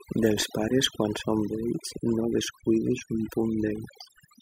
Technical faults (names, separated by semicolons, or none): overdone noise removal